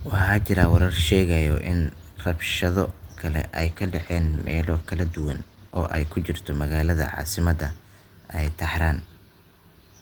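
From 3.57 s to 7.41 s there's a call bitrate drop. The bandwidth estimate sagged and starved the encoder, which fits a fall from about 32 to 13 kbps. The speech turns coarse and muffled, worst for roughly 2.5 s, then recovers.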